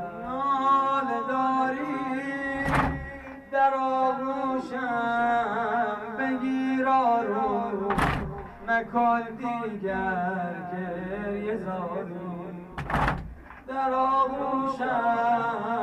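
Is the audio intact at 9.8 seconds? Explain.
Yes, the audio is intact at 9.8 seconds, with no dropout, click, distortion or other fault at that point.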